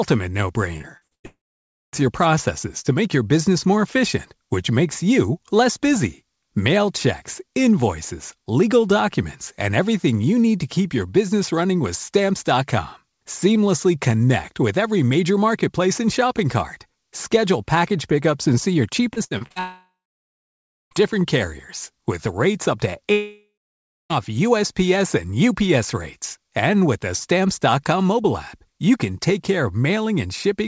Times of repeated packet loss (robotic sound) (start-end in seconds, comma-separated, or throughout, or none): 0.78-1.26, 19.14-19.58